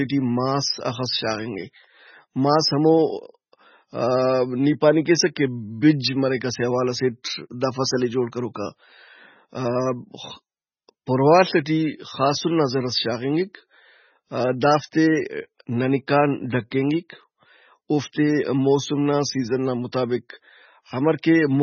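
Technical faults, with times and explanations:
Throughout, MP3 compression: the speech sounds watery and swirly with nothing above 6.6 kHz, likely from heavy low-bitrate encoding, which fits about 16 kbps.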